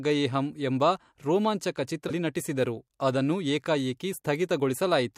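A broken MP3 bit reservoir is the likely cause of the glitch in this speech clip at 2.08 to 2.11 s, just before "ನಟಿಸಿದರು ಅದನ್ನು". For about 30 ms the sound jumps ahead, a span that fits a single MP3 frame of roughly 26 ms. After a cut in the stream, the next frame reaches back into earlier frames for its borrowed data and decodes bytes from a different frame.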